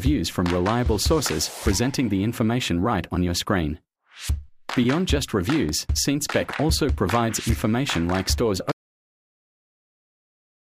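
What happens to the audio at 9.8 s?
At 9.8 s there is dead, total silence with no room tone at all: an audio dropout to silence that begins abruptly at 8.72 s and lasts to the end. The input was likely lost, leaving the recorder writing silence in its place.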